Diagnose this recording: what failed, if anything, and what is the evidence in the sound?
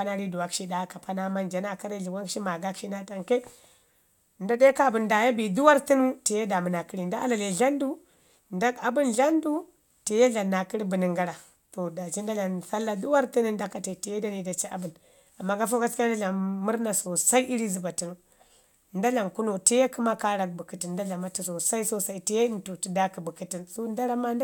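Nothing failed, and the sound offers no evidence of any fault at any stage.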